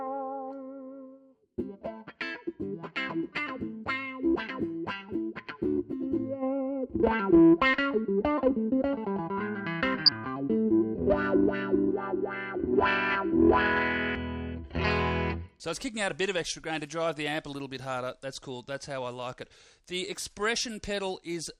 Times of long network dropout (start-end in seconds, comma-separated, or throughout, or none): none